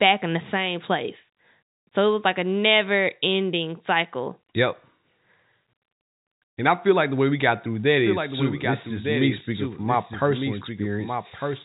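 A doubled audio track enters abruptly at 8.05 s and runs to the end of this telephone-band speech recording: a second, full-band copy about 5 dB quieter trails the original by roughly a second, with no reverberant tail, likely from a slower capture path recording the same signal twice. The G.711 coding itself leaves nothing above 3.8 kHz.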